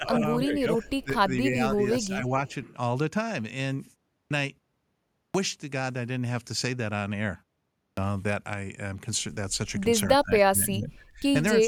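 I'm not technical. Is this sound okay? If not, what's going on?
No. There are three kinds of fault.

Speech suppressed in double talk: at 0.0 to 1.14 s, 1.49 to 1.58 s, 1.74 to 2.26 s, 10.19 to 11.22 s and 11.54 to 11.68 s, the speech drops in level and breaks up. The likely cause is both sides talking at once, so the echo canceller turned this talker down along with the echo. It is deepest near 10.2 to 11.2 s.

Echo leak: at 2.03 to 2.07 s and 2.47 to 2.54 s, a faint, brief copy of the voice returns about 283 ms late. It is likely echo from a loudspeaker on the far end that its echo canceller did not fully remove.

Clipped start after a pause: at 4.22 s, 5.26 s and 7.88 s, speech starts abruptly, with its first 86, 84 and 94 ms missing. The playback device dozes in the short gap before each one and wakes up too late to catch the start.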